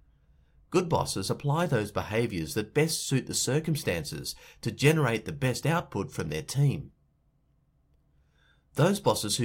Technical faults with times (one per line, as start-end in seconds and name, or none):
none